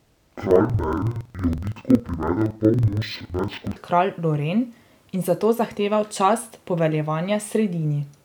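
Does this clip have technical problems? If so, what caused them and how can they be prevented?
Yes. From 0 to 3.8 s the speech drops an octave, doubled and choppy at 21.5 Hz. This is interleaved audio read as planar, which fits 2048-sample blocks. Declaring the correct channel layout at every buffer handoff prevents it.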